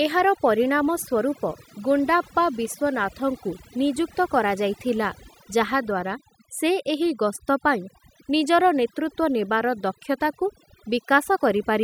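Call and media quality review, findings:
Overdone noise removal, whole clip: background dropped, breaking into twinkling specks between phrases. Denoiser set too strong, zeroing bands near its noise estimate. Unlike codec artefacts, it follows background level, not bitrate.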